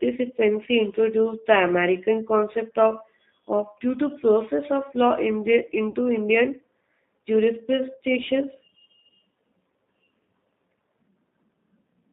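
Throughout, the G.729 codec is plainly audible: speech sits in a narrow band from about 200 Hz to 3.7 kHz and sounds rough and faintly synthetic, which fits an 8 kbit/s pulse-coded rebuild. Unlike plain band-limiting, the grain comes from the model itself.

From 5.90 to 5.95 s, VoIP packet loss concealed by the speech codec covers a 40 ms gap, which fits two 20 ms packets. The decoder stretches the last sound into a fading buzzy tone or coloured noise rather than silence or a click, and the sound stays weakened briefly afterwards.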